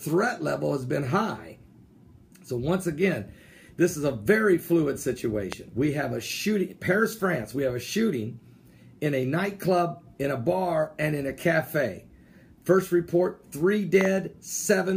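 At 5.52 to 5.55 s a single loud pop cuts in, peaking roughly 15 dB above the sound, which continues beneath it. A double pop follows at 14.01 to 14.07 s. Both are sharp voltage transients, likely from a switch, plug or static discharge.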